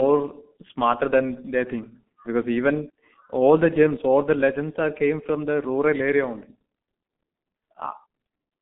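From start to finish the speech runs through a G.723.1 codec, and it's taking heavy damage. The band sits between roughly 150 Hz and 3.5 kHz, so everything above that is simply gone and the sound comes across muffled. The coder only refreshes its voice model once per 30 ms frame, which leaves a hoarse, grainy texture and smears the consonants together. The degree of damage fits the codec's rate of about 6.3 kbit/s.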